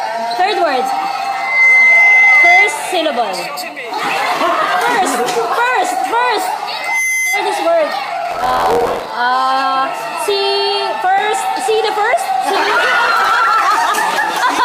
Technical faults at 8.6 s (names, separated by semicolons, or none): buffer tearing